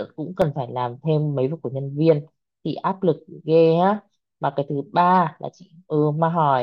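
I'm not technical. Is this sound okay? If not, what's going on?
No. At 0.42 seconds there is a tiny tick. It comes from a block of digital silence. For less than a thousandth of a second, the sound drops to pure nothing and then comes straight back. There is no fade in or out, so the sudden jump makes a click. The gap is too short to hear as a hole, so you hear a tick. This usually means the playback program did not deliver its next small chunk of sound in time.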